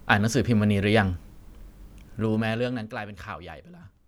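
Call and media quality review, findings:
Zipper noise, 2.14 to 2.97 s: audible ticking on speech during a level drop of roughly 15 dB. Gain stage stepping in 2 dB increments, about ten per second, without interpolation; each discrete jump clicks.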